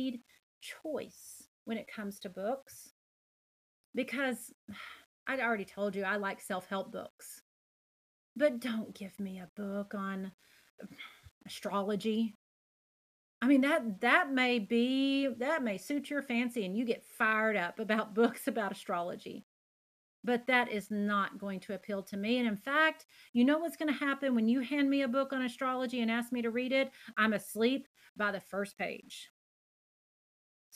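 From start to finish, the speech carries a grainy, rough distortion that shifts with each sound. Quiet passages turn gritty. The likely cause is low bit depth without dither, roughly 9 bits with plain rounding, leaving error about 35 dB below the signal.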